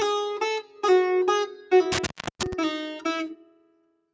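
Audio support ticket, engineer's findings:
Speech-tuned noise suppressor left active on non-speech audio, throughout. It treats steady tones, ambience and decays as noise and pulls them down while attacks pass, so the level pumps and thins, with swings of around 10 dB.

Noise suppressor cutting sound at 0.63–0.83 s, 1.47–1.71 s and 3.36–3.93 s. Sustained and fading content is misclassified as noise and ducked, by up to about 10, 11 and 12 dB respectively. Tails are cut short and the body sinks while transients survive.

Intermittent contact, 1.92–2.53 s. A loose cable or plug opens the line for roughly 0.33 s, probably at a connector. The sound drops out with crackle at both edges, and faint residual hiss remains during the gap.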